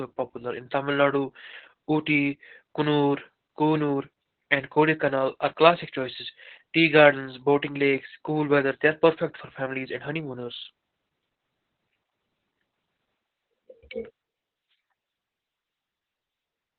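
It's a speech clip, and the whole thing has been through heavy Opus voice compression. Nothing reaches above about 4.5 kHz, so the voice sounds muffled and boxy, like an old phone line. That fits Opus dropping to narrowband at a very low rate, probably around 8 kbps, with the SILK speech coder doing all the work. The excitation is coded coarsely, which gives the voice its hoarse, slightly robotic edge from start to finish.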